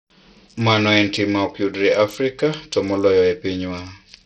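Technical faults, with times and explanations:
Throughout, Bluetooth SBC compression: the speech sounds gritty and dull, with the treble dropping in and out and a rough, grainy noise riding on the speech, likely from SBC encoding at a starved bit allocation, which fits a bitrate near 64 kbps. The codec splits the signal into a few wide bands and coarsely quantises them, starving the top bands. On a spectrogram the upper region appears patchy and blocky, flickering between energy and gaps, with smeared noise filling the lower bands.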